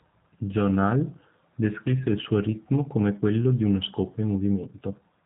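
G.729 codec damage runs throughout: speech rebuilt from a vocal-tract model and sparse pulses sounds rough and synthetic, with nothing above 3.8 kHz, fitting 8 kbit/s.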